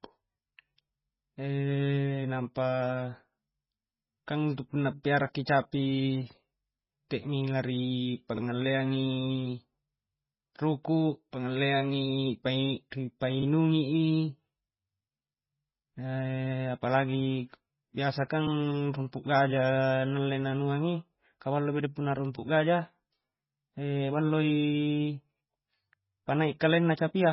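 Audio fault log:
Throughout, MP3 compression: the speech has nothing above 5.5 kHz, and the weaker detail below that cut-off turns watery and swirling, with s sounds chirping metallically and consonant onsets smeared. The likely cause is an MP3 encoder starved of bits, which fits a very low rate around 16 kbps. It drops the treble at a fixed frequency and zeroes faint frequency lines, which then flicker on and off from frame to frame.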